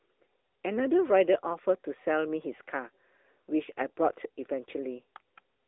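Throughout, AMR narrowband mobile codec damage at about 10.2 kbps: the pulse-driven vocal-tract model leaves speech buzzy and synthetic, with nothing above 3.6 kHz.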